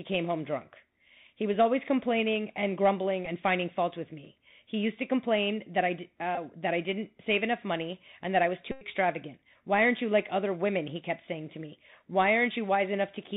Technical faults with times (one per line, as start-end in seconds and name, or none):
0.00-13.36 Bluetooth CVSD headset codec
3.25 Bluetooth headset packet repeated
6.35-6.38 Bluetooth headset packet repeated
8.71-8.86 Bluetooth headset packet repeated